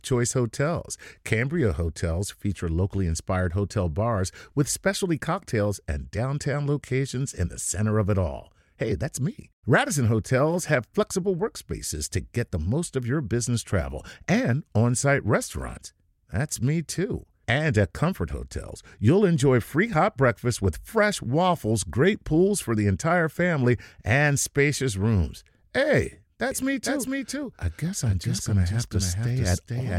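At 26.51 s a doubled audio track kicks in abruptly and runs to the end: a second copy of the speech trails about half a second behind, somewhat quieter, with no decay or room sound. It's likely a slower capture path or misaligned edit.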